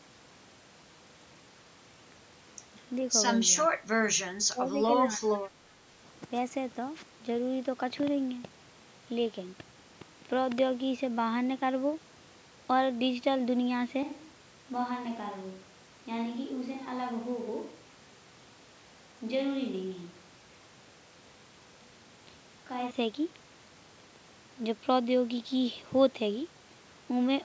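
At 3.69 to 3.80 s, 4.49 to 4.75 s and 5.06 to 5.32 s the voice dips briefly: by roughly 10 dB in the first, about 20 dB in the second and about 15 dB in the third, each lasting a tenth to a third of a second. This is speech suppressed in double talk, most likely an echo canceller mistaking the talker for loudspeaker echo while the far side spoke and turning both down. On a waveform the envelope pinches in sudden notches. A spectrogram shows matching pale vertical bands where energy thins out.

Right after, from 5.43 to 5.47 s, a faint scrap of delayed voice slips through, about 35 dB below the speech. This is an echo leak, likely a loudspeaker on the other end whose echo canceller failed to remove everything its microphone heard, sending back a copy about 419 ms late. It is too quiet to mark the waveform. On a spectrogram it would appear as a weak smear of harmonic lines repeating the pattern from about 0.42 s earlier.

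At 14.03 s the sound abruptly turns roomy and hollow, drops by roughly 5 dB and gains a bed of room noise about 35 dB under the speech. At 22.91 s it snaps back. This is a switch to a distant microphone, likely after the close microphone's signal dropped out and a farther one filled in. The waveform shows a step down in level at the start and back up at the end. On the spectrogram the low end thins, reverberant tails blur the syllable edges, and a steady noise floor fills the gaps, all within the call processing's normal limit of nothing above 8 kHz.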